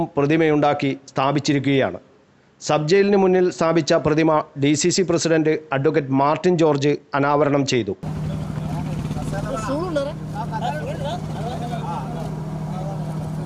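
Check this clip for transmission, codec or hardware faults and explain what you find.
One hardware fault runs through the clip: clock slip clicks from 0.14 s to 13.43 s, roughly every 0.05 s. A single sample slips each time, likely because two unsynchronised clocks differ by a few hundred ppm. At about twenty per second the ticks merge into a soft rattle, and their strict regularity distinguishes them from the irregular clicks of dropouts.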